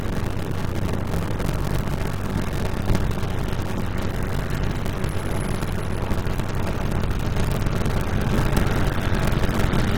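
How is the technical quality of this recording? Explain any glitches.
The technical quality is poor: a steady buzz of about 94 Hz runs through the whole recording, and the sound drags at 0.625 times its proper speed. This is a block size mismatch (padded). One stage hands over shorter blocks than the next reads, which fits a 512-sample read, and zeros fill each remainder. Those regular gaps produce the buzz and stretch the timing.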